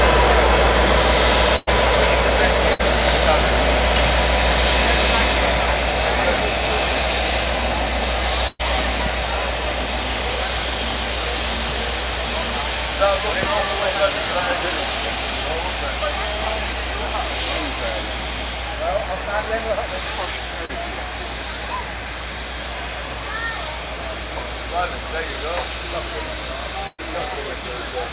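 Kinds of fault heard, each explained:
burst of packet loss: Around 1.56, 2.73, 8.47 and 26.87 s, runs of audio around 60 to 120 ms long go missing. Each gap is bridged by stretching the last sound into a held buzz or hiss that fades, and at 8.47 and 26.87 s it dies into about 30 ms of silence before the audio picks up further on. The length and audible fade separate it from the shorter concealment.
loud pop: At 9.0 s two sharp pops land within about 90 ms, and at 13.43 s a single, stronger one follows, peaking roughly 10 and 15 dB above the surrounding sound. The likely source is a voltage step from a plug, switch or static discharge. Unlike packet loss, nothing is removed or replaced; the sound carries on beneath each pop, which sits on top as an added transient.
short concealed packet loss: At 20.65 s roughly 40 ms of audio fails to arrive in time, and the gap is patched by continuing the preceding sound and blending back into the real signal. 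It comes across as a brief smear or wobble rather than a held, fading buzz, and it is shorter than the bursts. All of this sits within a narrow band with nothing above 4 kHz, which fits a G.711 call codec.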